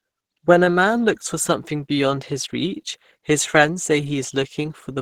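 From start to finish the speech carries a muffled, hoarse, grainy coloration, most likely from Opus compression at a low rate, around 16 kbps. The texture suggests the encoder's hybrid speech mode, with a low band coded as speech and the upper band filled in coarsely. Unlike MP3 damage, there is less swirling or watery churn and no obvious band holes. The top end stays present but rough, and the plainly audible damage is steady rather than intermittent.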